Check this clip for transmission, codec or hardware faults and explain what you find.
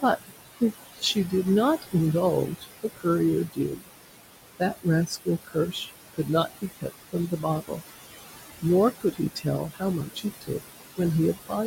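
The clip has two related faults, both from a noise suppressor working against room noise that sits about 10 dB below the speech.

Noise suppressor artifacts run through the whole clip. The suppressor judges, frame by frame, which frequency bands hold steady noise and pulls them down by about 18 dB. The room noise therefore drops away in the gaps and returns under the speech.

Speech cut by the noise suppressor happens seven times: 0.02 to 0.62 s, 0.93 to 1.33 s, 2.47 to 3.06 s, 3.47 to 3.89 s, 4.59 to 6.29 s, 6.62 to 7.81 s and 8.99 to 10.6 s. In each stretch the suppressor mistakes quiet speech for noise. It turns it down with the background, by about 18 to 21 dB at worst. Only parts of each stretch are hit, from a tenth of a second to well over half a second. Soft sounds and endings come out swallowed or faint.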